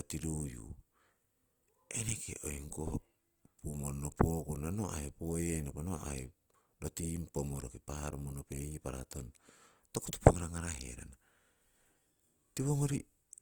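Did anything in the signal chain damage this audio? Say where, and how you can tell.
Yes, at the codec stage, for the whole clip. The speech sounds grainy and rough, likely from Opus compression in its CELT mode at a low rate, which fits about 24 kbps. A spectrogram shows content reaching 20.2 kHz, with few holes in the upper bands.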